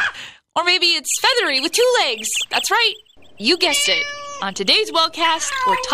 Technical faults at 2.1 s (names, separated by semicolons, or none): none